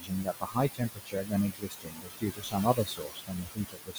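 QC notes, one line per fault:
Throughout: noise suppressor artifacts. The suppressor pulls down bands it treats as steady noise by about 18 dB, frame by frame, against room noise only about 6 dB below the speech.
0.00–0.58 s, 0.74–1.34 s, 1.51 s to the end: speech cut by the noise suppressor. The suppressor mistakes parts of the speech for noise and drops them by up to about 22 dB, roughly 0.4 s, half a second and two seconds in total, so softer sounds come out swallowed and faint.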